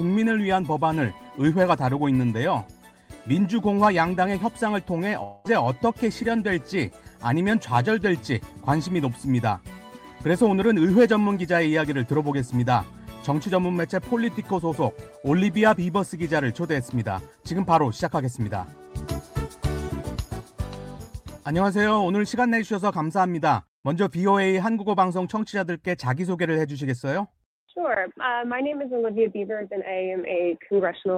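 From 5.23 to 5.47 s the audio turns into a fading buzzy continuation of the preceding sound, then resumes with roughly 220 ms skipped, likely a long network dropout.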